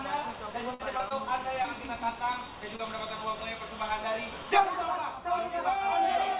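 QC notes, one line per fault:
0.74–0.81 s, burst of packet loss: Several consecutive packets arrived too late or not at all, so the receiver extended the last sound for about 53 ms and faded it as the gap went on. It is heard as a held buzz or a dying hiss, depending on what preceded it. Playback then jumps ahead, and roughly 60 ms of audio is skipped entirely, leaving an audible hole in the continuity.
0.97–1.01 s, 1.09–1.12 s, 1.62–1.66 s and 2.76–2.81 s, short concealed packet loss: Each time, about 20 ms of audio missed the decoder deadline. The receiver patched it with 12 to 23 ms of synthesized continuation, following the pitch of voiced material or shaped noise otherwise, before blending back into the real signal. Each patch sounds like a brief smear or wobble, and a short transient falling in the gap can drop out. All of this sits within a narrowband call path with nothing above 4 kHz, which fits G.711 mu-law at 64 kbps.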